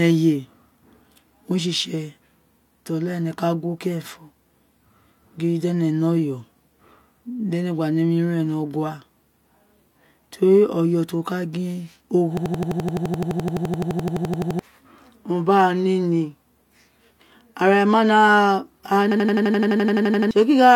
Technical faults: system hang loop

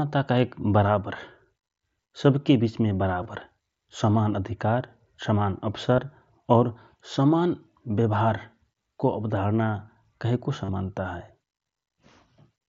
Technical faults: concealed Bluetooth headset packet loss

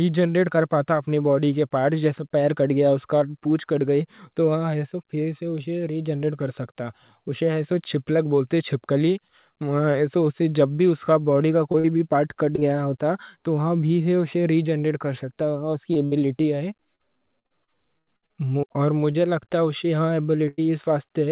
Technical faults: short concealed packet loss; repeated packet loss (robotic sound); burst of packet loss

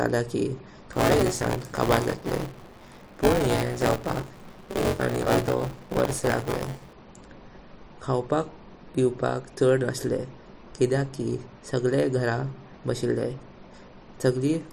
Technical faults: buffer tearing

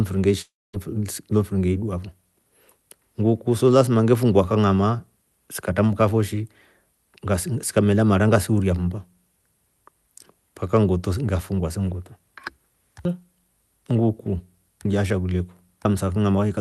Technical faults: long network dropout

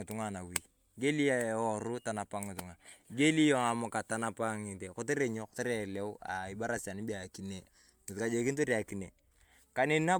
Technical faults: generation loss

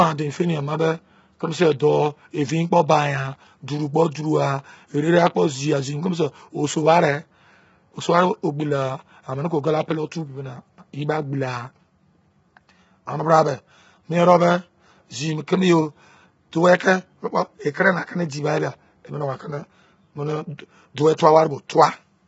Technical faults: low-delay AAC compression

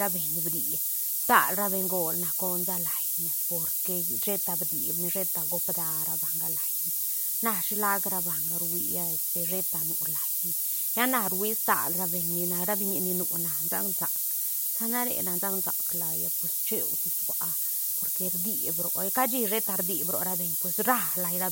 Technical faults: low bit depth with noise shaping

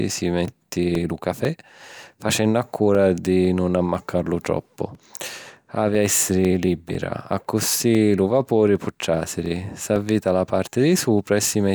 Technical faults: periodic USB or driver dropouts

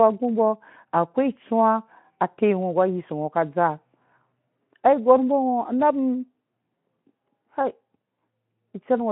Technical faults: none

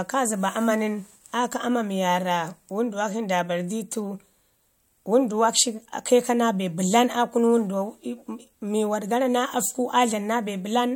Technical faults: none

